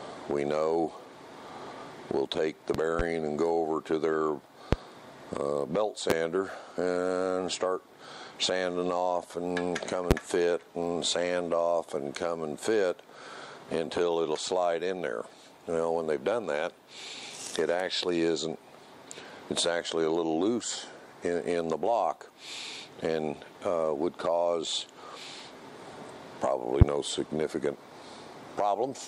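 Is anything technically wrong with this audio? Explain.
Yes. There are loud pops at 2.75 to 3.03 s (two in quick succession, peaking about 15 dB above the audio), 4.73 to 4.76 s, 6.10 to 6.14 s, 10.11 to 10.14 s and 26.81 to 26.85 s, each single pop about 25 dB above the audio. A sudden voltage step or pulse, likely from a plug, switch, static or driver glitch, gets shaped by the following circuits into a sharp thump. Unlike a dropout or an edit click, the sound carries on unbroken underneath.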